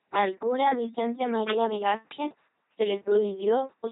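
Speech runs through the LPC-10 vocoder for the whole clip, which gives the buzzing, mechanical robot voice of a coder that fits about 2.4 kbit/s. Each moment is rendered as either pulse-driven buzz or pure hiss, with nothing in between, and nothing is heard above 3.8 kHz. That hard voiced-or-unvoiced switching sets it apart from the watery warble of other low-rate codecs. From 1.48 to 1.71 s there is cable scratch noise: dense, uneven rustling roughly 10 dB below the speech, likely from a worn cable or connector being moved. Its continuous scraping texture, rather than separate isolated clicks, distinguishes it from crackle.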